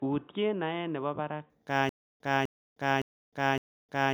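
Throughout the speech there is generation loss, likely from around four successive MP3 encodes at 128 kbit/s. Each pass requantised on a shifted frame grid, so the errors stacked. The result is swirly, hollow and smeared beyond what that bitrate alone explains, with consonant attacks softened. On a spectrogram the upper bands look patchy and mottled, with holes that flicker frame to frame, and nothing appears above 20.1 kHz.

From 0.0 to 1.5 s the input switched to a poorer device, most likely a different microphone or a headset call profile. That stretch sounds dull and boxy, about 5 dB quieter, with a fresh noise floor about 45 dB under the speech. At 1.5 s the tone clears up with no silence at the change. A spectrogram shows a hard ceiling at 3.8 kHz that lifts abruptly there, and the waveform steps up slightly in level.

From 1.89 s to the end there is stutter with silent gaps, likely a stalled stream replaying its last buffered fragment at each retry. 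A 252 ms burst of the same audio repeats every 0.56 s, with 310 ms of digital silence between, and the audio that should have played in that time is lost. On the waveform the identical blocks alternate with flat silent stretches. On a spectrogram, matching columns sit between empty bands.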